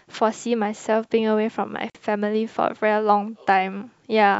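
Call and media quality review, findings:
Gap at a join of encoded pieces, speech dropping out from 1.90 to 1.95 s, a 48 ms hole with smeared edges, speech resuming right where it stopped. Probable component: segment concatenation after encoding. Each piece carried its own encoder start delay and padded final frame, never trimmed. Spacing of 2.0 s fits pieces encoded separately. Fix: strip priming and padding before joining.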